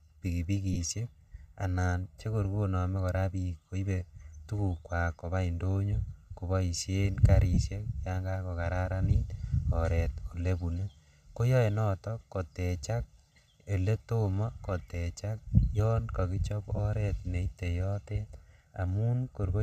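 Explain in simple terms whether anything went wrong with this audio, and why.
Two things went wrong in this speech.

The first is channel delay (comb filtering), and it lasts the whole clip. One side of the stereo signal arrives late by roughly a millisecond and a half, and when both sides are mixed together, some pitches cancel. The first gap falls around 300 Hz, with more at regular steps above it. The result is a hollow, slightly tunnel-like tone. Unlike a brief glitch, it never comes and goes; the colouring stays fixed throughout.

The second is lost LE Audio frames, at 0.73 s (22.5 ms), 7.54 s (30 ms) and 16.76 s (22.5 ms). Each gap fits a handful of 7.5 ms Bluetooth frames. Instead of going silent, the decoder patches each gap by reusing the last bit of sound with its detail scrambled, so you hear a short, fuzzy smear rather than a clean click or hard dropout. This points to a wireless link, likely Bluetooth LC3, which otherwise adds only light damage of its own here.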